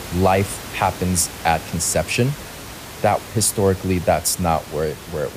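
No technical faults are audible.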